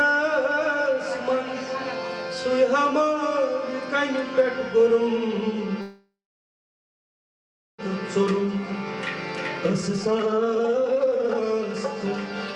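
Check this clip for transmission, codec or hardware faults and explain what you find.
Two transmission faults are audible: a call audio freeze followed by jitter buffer speed-up.

From 5.81 to 7.80 s the sound stalls, a brief fading continuation of the last sound and then about 1.6 s of silence, before resuming where it stopped with nothing lost. This is likely a call audio freeze: delayed packets emptied the jitter buffer, inserting roughly 2 s of extra delay.

From 8.16 to 8.73 s the audio runs slightly fast, at 107%, and from 9.57 to 11.63 s it becomes clearly hurried, at 180%, with pitch unchanged. This is jitter buffer speed-up: to work off the built-up delay, the receiver cut short pitch-period pieces repeatedly, dropping about 50 ms in the first stretch and around one and a half seconds in the second.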